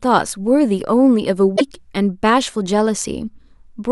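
From 1.56 to 1.61 s the speech jumps ahead and the next 56 ms come out garbled, roughly two 26 ms frames. This is likely a broken MP3 bit reservoir: after frames were lost, the following frames read borrowed bits from the wrong frame.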